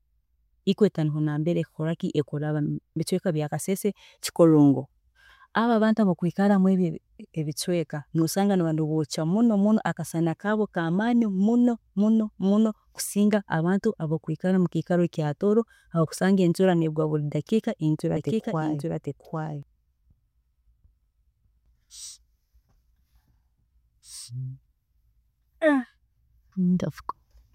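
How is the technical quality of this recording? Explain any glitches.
One glitch stands out. From 18.17 to 19.63 s the speech is doubled: a second full-band copy, about 5 dB quieter, trails roughly 0.7 s behind, likely from a slower capture path or misaligned edit. Unlike a room echo, it has no decay or reverberant colour and cuts in and out abruptly.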